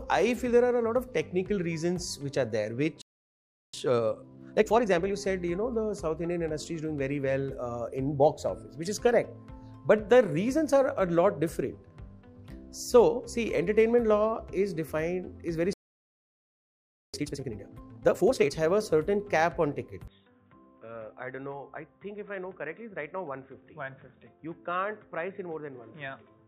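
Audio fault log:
3.02–3.74 s and 15.73–17.14 s, playback stall. The sound stops mid-flow and goes silent, first for 0.72 s, then for 1.4 s. The player likely ran short of data or its thread was blocked, so output halted until it recovered.
3.74–5.16 s and 17.14–18.54 s, time-compressed catch-up. Right after each stall the audio hurries at normal pitch, at 1.5 times speed and then 2 times. Small pieces are cut and cross-faded to clear the backlog.
20.08 s to the end, input switched to a poorer device. With no gap at the switch, the sound turns dull and boxy, and drops by about 10 dB. A faint new background noise sits well below it. This likely comes from a change of microphone or headset profile.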